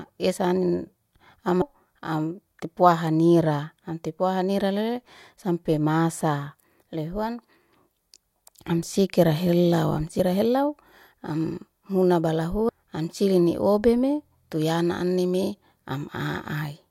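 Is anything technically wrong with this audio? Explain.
Yes, there are compressed frames skipped at 1.62 s and 12.69 s (just before "am silini obeme tuyana"): a few hundred milliseconds of speech vanish in 32 ms frame steps, so the audio jumps ahead at each point.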